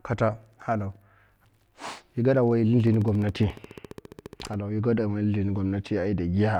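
A train of clicks runs from 2.80 to 4.55 s: some thirty regular pulses at 14.4 per second, near speech level, likely electrical interference.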